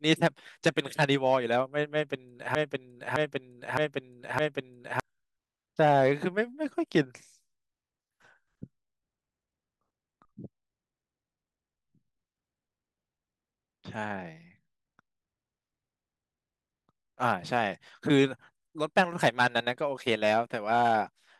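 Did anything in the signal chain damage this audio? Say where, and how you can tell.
Yes. From 2.55 s to 5.00 s the speech turns into a broken-record loop: one fragment about 0.61 s long plays four times back to back, identical each pass, and the speech that should have filled those seconds never arrives. Exact repetition with no variation points to the delivery side rather than the recording, most likely a stalled player, encoder or stream whose buffer kept re-sending the last chunk it held until fresh data resumed.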